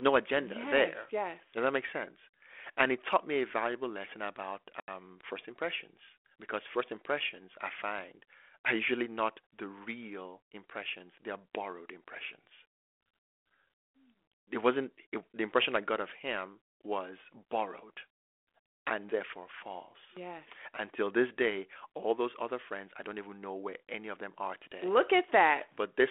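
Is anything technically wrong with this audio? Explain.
Yes. In this speech, carried as 32 kbit/s G.726 ADPCM confined to roughly 300 Hz to 3.4 kHz, there is packet loss on the ADPCM call from 4.8 to 4.89 s. About 80 ms, around four packets' worth, vanishes and is filled with silence. The waveform shows a flat, hard-edged gap, and the spectrogram shows a clean vertical blank. Because the decoder's adaptive predictor and step size have drifted from the sender's, the returning speech comes back slightly distorted, settling over some tens of milliseconds.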